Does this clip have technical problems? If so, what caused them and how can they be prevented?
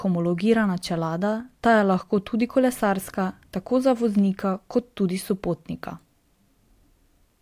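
No, no technical faults are audible.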